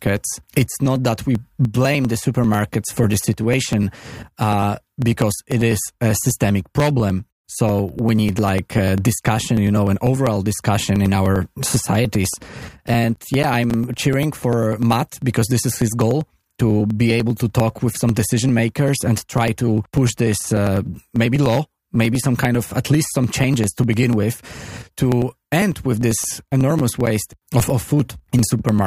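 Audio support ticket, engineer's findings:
Periodic USB or driver dropouts, 0.07 s to 28.79 s: regular ticks every 0.099 s, audible only under signal. Probable cause is the USB bus or audio driver stalling on a fixed schedule. Roughly 1 ms skipped each time, several hundred events in total.

CD scratch ticks, 12.34 to 14.25 s and 25.97 to 27.88 s: eight ticks per burst, about four per second, the longest around 10 ms. Probable component is the disc and transport: one unrecoverable blemish per revolution, interpolated or muted.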